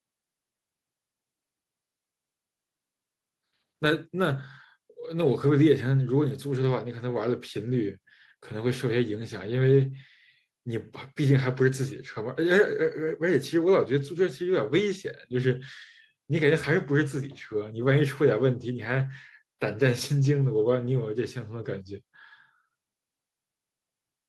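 No technical faults can be heard anywhere in the speech recording. There is nothing to mark at any point in the timeline.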